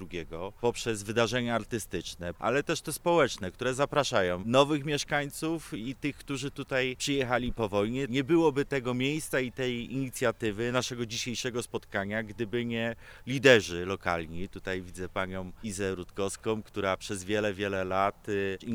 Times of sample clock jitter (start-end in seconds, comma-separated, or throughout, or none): 4.74-18.75